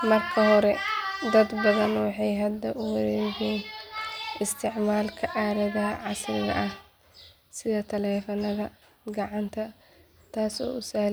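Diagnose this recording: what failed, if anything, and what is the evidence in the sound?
Nothing failed here: the speech comes through with no audible fault at any stage, from the wiring and converter right through to playback.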